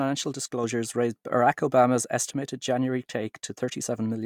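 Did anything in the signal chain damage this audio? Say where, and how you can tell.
Yes, there's a sudden gain jump at 0.64 s. Speech and the noise floor rise together by about 4 dB, likely from an unramped digital gain change.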